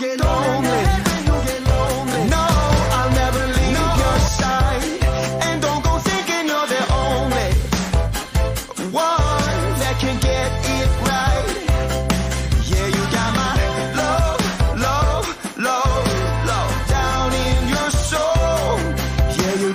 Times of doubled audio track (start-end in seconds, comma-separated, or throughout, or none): 0.00-4.28